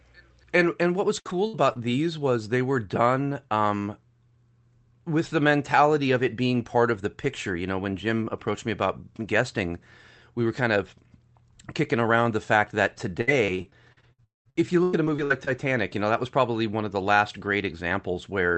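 Speech over an Opus call path, with the top end stopping around 8 kHz, and it has two bursts of repeated packet loss that give a choppy, robotic sound. From 1.19 to 1.92 s, right after "and what was" and before "was they were done", four short holes (the longest about 58 ms) get patched by stretching the previous sound. From 13.21 to 15.49 s, after "around the fact that" and before "you know that was", it's worse, with around fifteen gaps up to about 96 ms and roughly a quarter of that stretch concealed. Inside that second burst, from 14.24 to 14.47 s, the sound smears into a fading buzz or hiss and then goes quiet for about 0.17 s, which is likely a long network dropout where the audio never arrived.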